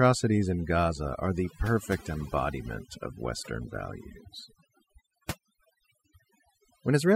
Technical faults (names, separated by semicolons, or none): overdone noise removal